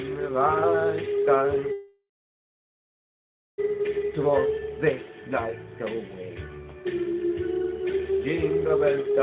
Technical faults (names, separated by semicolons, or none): call audio freeze